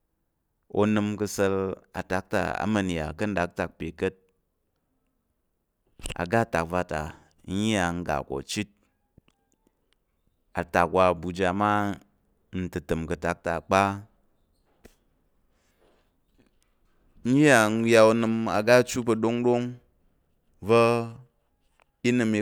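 No dropouts, clicks, distortion or other technical faults turn up anywhere in this speech recording.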